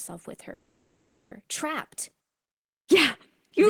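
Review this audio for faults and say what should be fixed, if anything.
Call audio freeze, 0.53 to 1.32 s: speech stalls into a fading held sound, resumes intact 780 ms late, likely delayed packets emptying the jitter buffer. To prevent it, stabilise the network path or give the adaptive jitter buffer more headroom so late packets cannot starve playback.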